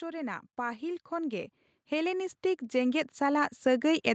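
A speech recording carried over a call, with sound reaching no higher than 8 kHz, shows automatic gain rising from 0.05 s to the end: the gain control judged the input too quiet and kept lifting it, so voice and background noise swell together. That shared, gradual rise separates it from a talker simply speaking louder or moving closer, which would leave the background level unchanged.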